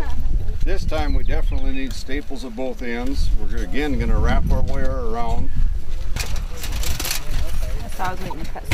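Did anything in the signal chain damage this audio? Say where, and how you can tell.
Yes. Near the very end, from 8.30 to 8.33 s, there is a short chirp-like blip of misplaced energy peaking at about -20 dBFS, unrelated to the surrounding sound. This is a corrupt frame decoded at the codec stage. Flipped bits in a compressed frame sent wrong gains or misread spectral codes to the decoder. It played the frame anyway, placing energy at the wrong frequencies for the span of the damaged frames, a few frames here.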